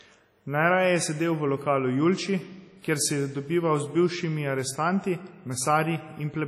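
All the way through, the speech stops dead around 14.9 kHz and keeps a dull, smeared edge, likely low-bitrate audio saved at a high bitrate, so the re-encode couldn't restore what was lost.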